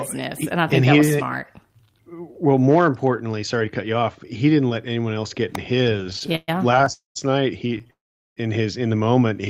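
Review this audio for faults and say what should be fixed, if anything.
An electrical switching spike sits at 5.55 s, just after "anyone else get in": a sharp snap, likely from a nearby switch, motor or static discharge arcing into the line. On a waveform it is a sharp needle; a spectrogram shows a thin vertical stripe across all frequencies. Shielding cables and separating audio from switched mains loads would prevent it.

Repeated stalls (stutter) follow from 5.83 to 6.88 s, with 20 gaps totalling 329 ms, the longest 124 ms, so about 31% of that span is continuation of earlier sound. A second run from 7.67 to 7.90 s, ending just before "in his in the", has 7 gaps totalling 69 ms, none longer than 17 ms. The network kept delivering packets late, so the jitter buffer emptied repeatedly and the receiver stretched the last sound each time. Nothing is lost, but the sound drags. A spectrogram shows repeated smeared, flattened patches, and the waveform shows short repeated stretches. 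A larger adaptive jitter buffer and a steadier network path would prevent it.

A call audio freeze occurs from 6.92 to 7.17 s, inserting 231 ms, 150 ms of it silent. A second one runs from 7.90 to 8.39 s and inserts 462 ms, 420 ms of it silent. Both are likely packets held up in transit. The last sound is extended and fades out, then the audio resumes where it stopped. A spectrogram shows a brief smeared tail followed by a blank band, and the waveform flattens. Better network quality of service and buffering would prevent it.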